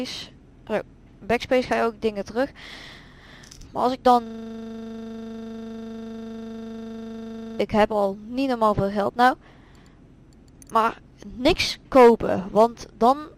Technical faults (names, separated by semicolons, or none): system hang loop